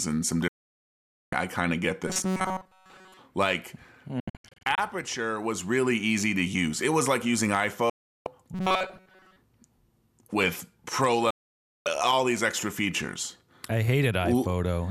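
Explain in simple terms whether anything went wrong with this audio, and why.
The receiver repeatedly lost the digital signal and muted, causing a digital broadcast dropout: the speech cuts out abruptly at 0.48–1.33 s (after "and some", returning at "I kind of get"), 4.20–4.78 s (several short holes), 7.90–8.27 s (after "was like using") and 11.30–11.86 s (after "with pro", returning at "all these extra features").

At 2.07–3.19 s and 8.54–9.36 s, new audio likely arrived too slowly, so software replayed tiny snippets about 5 ms long. This robotic sound from repeated short buffers replaces most of the real speech with a stiff metallic buzz near 188 Hz.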